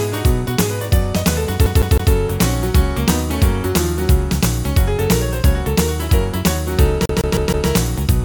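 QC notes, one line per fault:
1.66–2.13 s and 7.06–7.68 s, CD stuck on one turn: the same 0.16 s segment repeats three, then four times with brief mutes at each jump, an evenly timed mechanical skip rather than a random digital glitch.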